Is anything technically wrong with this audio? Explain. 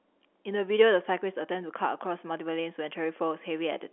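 No, nothing is technically wrong: the speech is confined to the normal telephone band of roughly 300 Hz to 3.4 kHz, consistent with standard 64 kbit/s G.711 A-law line coding working as intended.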